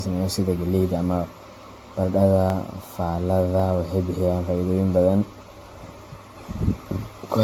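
From start to end, the speech sounds swirly, smeared and hollow, with blurred attacks and nothing above 18.6 kHz. This is generation loss, likely from about seven AAC passes.

From 0.31 to 6.88 s, a regular click recurs about every 1.1 s. These are clock drift buffer slips, likely from a clock mismatch of roughly 300 ppm.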